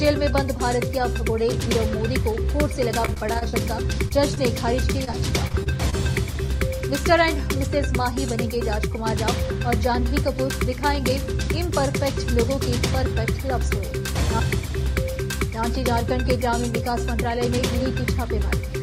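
From 3.05 to 3.55 s there is repeated packet loss (robotic sound). Six separate gaps, the longest 32 ms, fall within half a second. Each one is patched by extending the preceding audio, so about 27% of that stretch is synthesised fill rather than received signal. The sound turns choppy and robotic, with small pieces dropped out between the patched sections.

At 4.09 to 4.12 s and again at 4.35 to 4.38 s there is short concealed packet loss. Each time, about 20 ms of audio failed to reach the decoder in time. The receiver bridged the hole by continuing the last sound and then crossfading back into the real signal. Each event is heard as a brief smear or wobble rather than a clean dropout.

From 5.04 to 5.94 s the repeated packet loss returns. Again there are six gaps, the longest 29 ms. They are spread over nearly a second, so about 15% of the span is concealed. The effect is the same choppy, robotic texture.

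At 6.46 to 6.50 s there is one more short concealed packet loss, about 20 ms of missing audio filled in the same way. It is heard as a single short smear.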